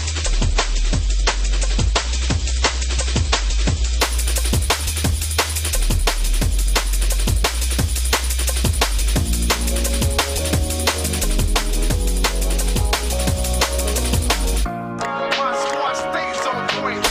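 Adaptive stream starting at a low bitrate: until 4.0 s, nothing above 8.3 kHz and heavy artefacts, like 32 kbit/s MP3, then a seamless jump up.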